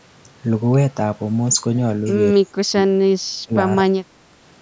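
From 2.41 to 3.55 s and again from 3.85 to 4.28 s, the speech dips by roughly 30 dB and breaks up, likely speech suppressed in double talk as the echo canceller ducked the talker.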